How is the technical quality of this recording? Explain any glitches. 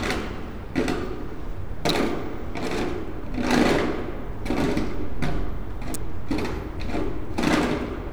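Two sharp snaps interrupt the recording. They are electrical switching spikes, at 1.89 s and 5.94 s, each peaking near -10 dBFS. A nearby switch or motor likely arced, and the audio line caught it. Each is heard as a brief, hard click on top of the sound.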